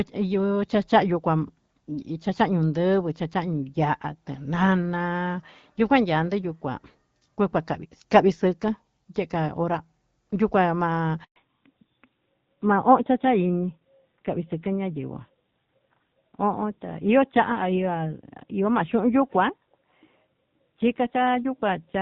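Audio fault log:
11.24–11.36 s, handover gap: the speech cuts out within a few tens of milliseconds and stays silent for 120 ms while the call switches networks and no speech frames arrive.
11.36–22.01 s, fallback to narrowband: everything above 4 kHz disappears, and the earlier lightly coded HD Voice becomes duller and rougher, which fits a switch to a low-rate narrowband codec.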